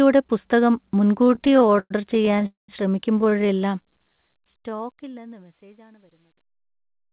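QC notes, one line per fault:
1.22–2.46 s, repeated stalls (stutter): Close to thirty little hiccups in a row, the longest about 111 ms, with roughly a third of that stretch (384 ms) being filled-in sound rather than fresh audio. Packets kept turning up late, the jitter buffer kept running dry, and the receiver stretched the last bit of sound each time, fading it on the longer waits. Nothing's actually lost, but it drags and stutters.
2.46–2.70 s, call audio freeze: Right after the stutter the sound hangs for about 221 ms. A short smeared continuation of the last sound fades out into about 150 ms of silence, then the audio picks up exactly where it stopped. It's likely the packets got held up in transit, so the buffer emptied completely. The receiver's delay grew by those 221 ms, so a gap was inserted rather than anything dropped.
3.18–3.50 s, repeated stalls (stutter): Same story, on a smaller scale. 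There are nine quick stalls, none longer than about 19 ms, but they still cover about a third of the span (102 ms filled). Each one is the receiver briefly repeating the tail of the last sound while it waits for late packets.
3.83–5.32 s, jitter buffer slow-down: This stretch plays at about 89% speed, with about 176 ms added in total, but the pitch holds steady. The buffer was topping itself back up by repeating single pitch periods and slivers of pauses over and over. That's why sounds feel drawn out instead of lower. The whole thing sits inside a band that stops at 4 kHz, which fits a narrowband telephone codec like G.711.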